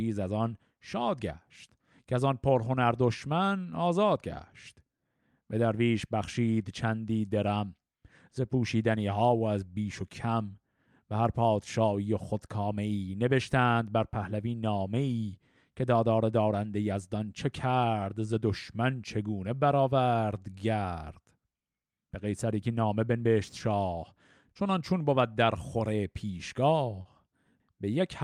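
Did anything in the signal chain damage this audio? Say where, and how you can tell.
Yes. The damage happens at the network stage, as short concealed packet loss from about 27.01 s to 27.07 s near the end of the clip. About 40 ms of audio never arrived in time, and the receiver patched the hole by extending the preceding sound before blending back into the real signal. That produces a brief smear rather than silence, which separates it from a plain dropout, and its smooth rejoin separates it from a hard click.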